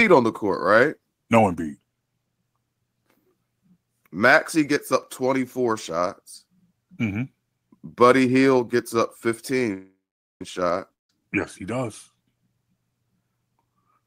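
At 9.73 s, packets were likely held up in transit and the receiver's jitter buffer ran dry, producing a call audio freeze that lasts until 10.42 s. The receiver stretches the last bit of speech into a brief fading buzz or hiss, then about 0.45 s of silence follows. When the delayed packets finally arrive, speech picks up exactly where it stopped, so nothing is lost, but everything after this point runs about 0.67 s late.

From 10.94 s to 11.1 s, incoming audio likely stopped arriving altogether, a long network dropout in which the lost material is never recovered. A gap of about 0.16 s is filled, and almost all of it is plain silence, with only a trace of the previous sound carried over at the start. When speech returns at 11.1 s, it skips ahead and the 0.16 s that went missing is gone for good.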